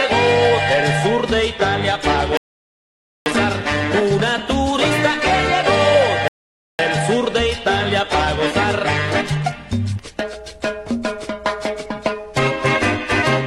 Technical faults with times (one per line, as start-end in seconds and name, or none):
2.37-3.26 rebuffering stall
6.28-6.79 rebuffering stall